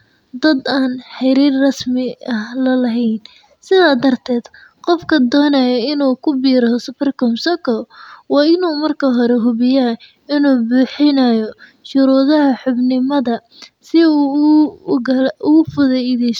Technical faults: none

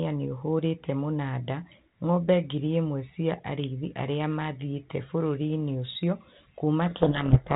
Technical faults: codec payload misread

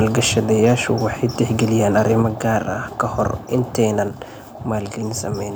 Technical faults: microphone overload; microphone volume stepped down

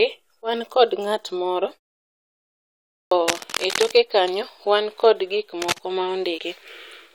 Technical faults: clipped start after a pause; cable scratch noise; damaged data in a compressed stream

